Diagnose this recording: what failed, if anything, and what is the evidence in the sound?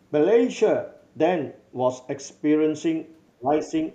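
Call processing: from 3.29 to 3.69 s the speech dips by about 25 dB, likely speech suppressed in double talk. It is attenuated, not cut to silence as in a dropout.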